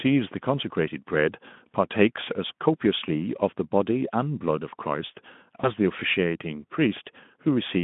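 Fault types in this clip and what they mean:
VoIP packet loss concealed by the speech codec: at 5.61 s the speech briefly smears into a stretched buzzy tone or coloured noise instead of dropping out, which fits one lost 20 ms frame that the Speex decoder filled by repeating its last pitch and spectral shape at falling gain. Because each frame builds on the one before, the weak, distorted sound lingers until about 5.72 s. A plain dropout would cut to silence or click; this one sustains and fades.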